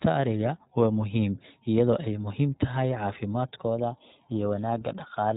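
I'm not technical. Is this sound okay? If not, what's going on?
No. Throughout the recording, the speech has been squeezed through the iLBC codec, a compression method built for internet phone calls. It chops the sound into 20 ms slices and rebuilds each one separately, which leaves the voice sounding slightly rough and artificial. It also discards everything above about 3.8 kHz, so the bright, crisp detail is missing and the result has the muffled, boxy quality of a phone line.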